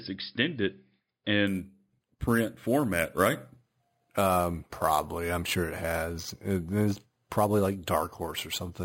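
From 1.47 s to the end of the speech, imaging from sample-and-hold upsampling sets in. The rate was raised by holding each sample in place, with no smoothing filter. Mirrored copies of the spectrum now sit above the real content. The lowest copy spans about 5.5 kHz to 11 kHz, which fits an original rate near 11 kHz. It runs about 17 dB below the signal. It sounds like a bright metallic fizz that rises and falls with the speech.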